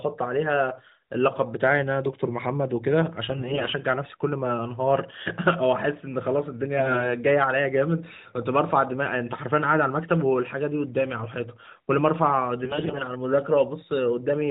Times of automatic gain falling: none

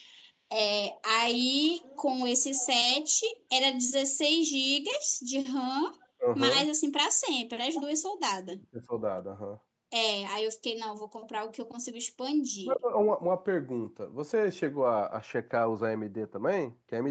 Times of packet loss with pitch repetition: none

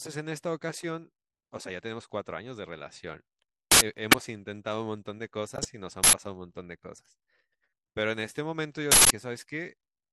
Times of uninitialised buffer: 3.72-3.81, 6.04-6.13, 8.92-9.10

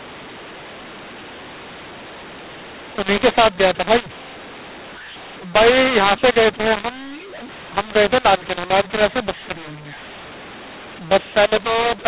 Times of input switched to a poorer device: none

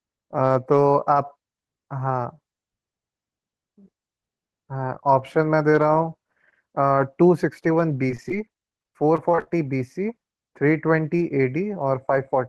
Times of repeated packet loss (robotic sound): 8.08-9.51

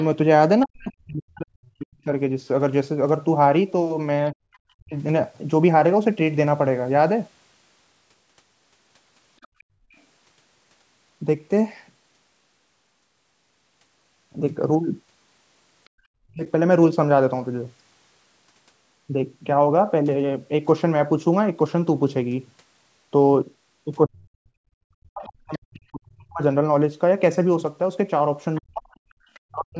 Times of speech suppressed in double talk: 0.66-4.95, 16.27-16.43, 24.06-29.80

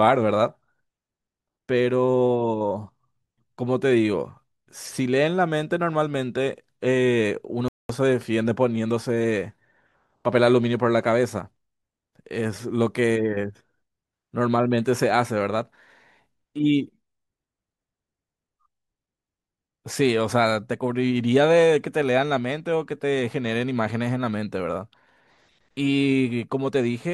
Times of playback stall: 7.68-7.89

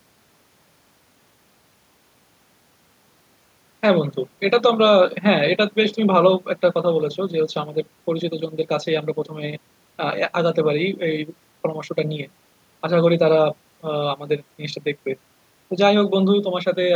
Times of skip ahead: none

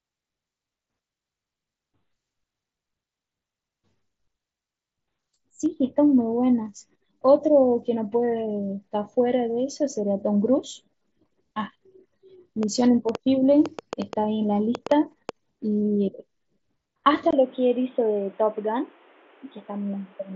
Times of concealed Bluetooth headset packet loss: 5.65, 17.05

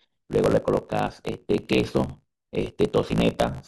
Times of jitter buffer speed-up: none

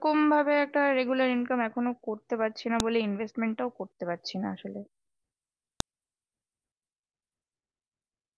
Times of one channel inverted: none

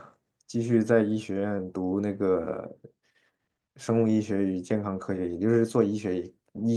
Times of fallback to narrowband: none

